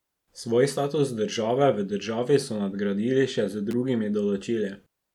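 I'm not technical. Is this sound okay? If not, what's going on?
No. At 3.71 to 3.73 seconds there is a sharp snap laid over the speech. This is an electrical switching spike. It lasts only a split second. A spike like this is likely caused by a nearby switch, motor or spark of static. It sends a tiny burst of electricity into the audio line. The recording picks that burst up as a click on top of the speech.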